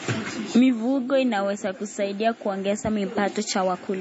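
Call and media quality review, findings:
Throughout: watery, swirly speech, dull top end, smeared attacks, metallic chirps on s sounds. Likely MP3 compression with heavy damage: treble cut off, weak frequency lines flickering on and off per frame, consistent with a 32 kbps encode. Room noise sits about 49 dB below speech.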